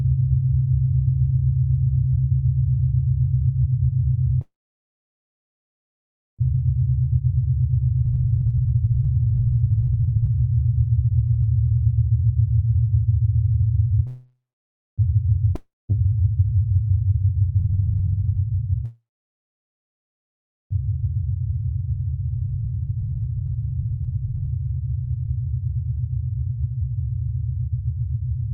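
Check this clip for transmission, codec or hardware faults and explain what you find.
The recording of everyday sounds has three transmission faults: repeated call audio freezes, jitter buffer speed-ups that follow them, and one long network dropout.

Call audio freeze occurs at 4.41 to 6.41 s, 14.07 to 15.00 s and 18.85 to 20.73 s. At each point the last sound carries on briefly as a fading buzz, then falls quiet for about 1.9 s, 0.6 s and 1.7 s. When the sound resumes, it picks up exactly where it stopped. The likely cause is delayed packets that let the jitter buffer run dry. Because nothing is skipped, each stall adds delay instead of removing material, and that separates it from a dropout.

Jitter buffer speed-up follows the freezes at 6.54 to 11.98 s, 17.58 to 18.64 s and 20.88 to 26.07 s. The sound runs at 136%, 173% and 138% of normal speed while its pitch stays the same. The receiver is cutting pitch-period-sized slices over and over to shed the backlog. 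That is roughly 2 s in each of the long stretches and about 0.7 s in the short one. The hurried pacing at unchanged pitch marks it apart from a sample-rate error, which would also raise the pitch.

Long network dropout occurs at 15.56 to 15.91 s. The sound decays into a buzz and then about 0.21 s of silence. When it returns, it has moved on, and about 0.34 s of material never plays. The likely cause is a burst of packets that never arrived at all. Unlike the freezes, the timeline jumps forward here, so the gap is a loss and not a pause.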